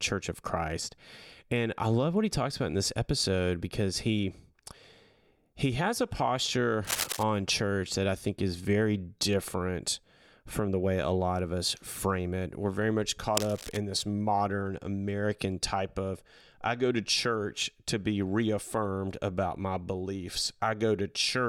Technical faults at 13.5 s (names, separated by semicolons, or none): cable scratch noise